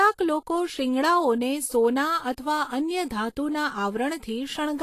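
Plainly audible lossy encoding, likely Vorbis compression at a low setting around 34 kbps, runs through the whole speech clip. The encoder discards everything above 14.2 kHz and coarsely quantises the remaining treble, so the speech turns hissy and grainy, tones sound roughened, and attacks blur.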